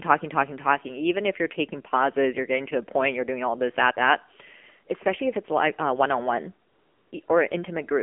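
The whole clip carries the AMR narrowband mobile codec. The speech sits in a telephone band of 200 Hz to 3.4 kHz. Its buzzy, synthetic tone points to a low AMR-NB mode, near 7.4 kbps. The codec models speech from few bits, and the damage is plainly audible.

AMR comfort noise appears from 6.68 to 7.12 s, and again from 7.26 to 7.28 s. The phone judged these moments silent and stopped sending speech. The receiver filled the 440 ms and 20 ms gaps with smooth, steady synthetic noise that switches in and out.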